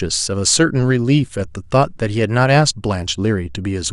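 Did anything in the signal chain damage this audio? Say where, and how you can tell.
Yes, the damage is at the codec stage and runs through the whole speech clip. The top end sounds dull, upper frequencies flicker in and out, and a gurgling, granular roughness sits on the remaining sound. This is likely MP2 compression at a low rate, consistent with about 80 kbps. Layer II divides the signal into 32 sub-bands and shares out bits. Short of bits, it shuts off upper bands and coarsely quantises the rest, producing this sound.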